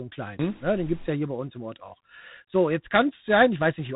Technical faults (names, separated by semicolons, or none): G.726 ADPCM